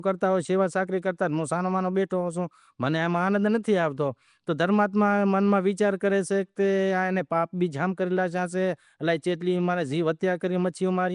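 Speech throughout has a rough, hissy halo and a smeared, underwater quality, with nothing above 10.6 kHz. This is likely Nellymoser compression at around 44 kbps, where weak bands starved of bits are filled with noise.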